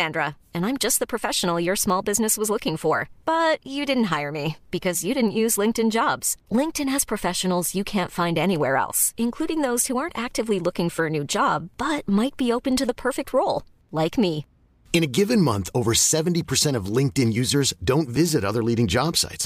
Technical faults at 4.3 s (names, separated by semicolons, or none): none